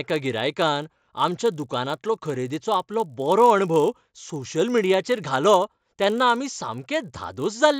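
From start to finish, the resampler restarted on every block. Each 20 ms block was converted on its own, which fits a change from 16 kHz up to 48 kHz, so at every block edge the filter lacked the real neighbouring samples and worked from silence or the wrong end of the block. That leaves a small error at each boundary, repeating 50 times a second. It comes through as a low, rough buzz riding on the speech, present only while sound is there.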